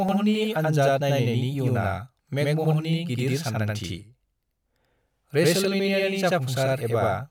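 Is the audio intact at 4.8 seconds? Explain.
No. At 4.8 seconds the speech carries a channel delay (doubling), and this fault runs through the whole clip, not just that moment. One channel arrives about 85 ms late, which fits a 4096-sample buffer. When the two channels are summed to mono, the late copy doesn't blend in. It is heard as a separate doubling, like a single slap echo at the same level. Every syllable seems to be spoken twice in quick succession.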